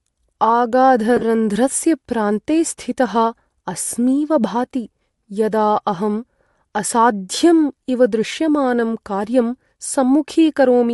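A speech recording with a breathy, grainy edge on the voice and a thin, noisy top end throughout, likely from Bluetooth LC3 compression, where the LE Audio transform codec zeroes much of the upper spectrum and fills it with noise, which fits a bitrate around 48 kbps and 7.5 ms frames. Between 1.17 and 1.23 s the sound briefly breaks into a noisy, smeared texture in short patches, the longest a few tens of milliseconds. These are lost LE Audio frames: the decoder covers each gap by repeating the last spectrum with random signs, about 45 ms of concealment spread over 60 ms, which fits roughly six lost frames.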